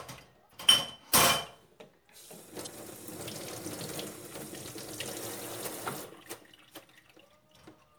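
A recording of everyday sound carries three short bursts of damaged data in a compressed stream, at 0.49–0.53 s, 2.63–2.67 s and 5.63–5.68 s, each about 44 ms long. Corrupted bytes make the decoder misread frames and lose sync, giving a brief chirp, squawk, click or short hole. A spectrogram shows each as a narrow vertical break unrelated to the surrounding sound, and the waveform shows an abrupt discontinuity there.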